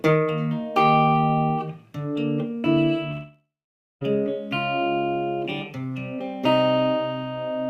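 A long network dropout runs from 3.11 to 4.03 s. The last sound stretches into a fading buzz or hiss, then 0.52 s of silence, and the audio resumes with 0.9 s missing, likely because incoming data stopped arriving and the receiver filled the gap.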